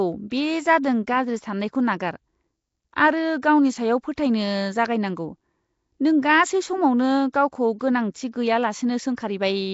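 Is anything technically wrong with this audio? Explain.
Yes. Throughout the speech there is a rough, hissy halo and a smeared, underwater quality, and nothing is present above 7.7 kHz. The likely cause is Nellymoser compression, the Flash-era Nellymoser Asao codec, at a rate that points to around 32 kbps. It codes short fixed blocks with a very small bit budget. Weaker frequency bands get no bits at all and are refilled with noise, which produces the grainy hiss and the watery blur.

Five attacks are preceded by a brief hiss and land soft and smeared, at 0.83, 3.42, 4.16, 7.32 (just before "गावखौ गोनांथि") and 7.79 seconds. This is pre-echo. The codec spreads quantisation noise evenly across each block, so noise sized for a loud onset late in the block also fills the quiet instant before it. Here that smear runs about 11 to 18 milliseconds ahead of each attack.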